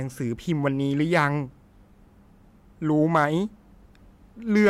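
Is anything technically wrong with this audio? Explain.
Yes. There is hard clipping in two places in this speech: a brief crackle from 3.15 to 3.24 s, and a harsher, fuzzy rasp from 4.56 s to the end at 4.69 s. In both, the peaks ran past the largest level the signal path could carry, by about 2 dB and then about 6 dB. Their tops were sliced flat, adding high harmonics that grate more as the overload deepens.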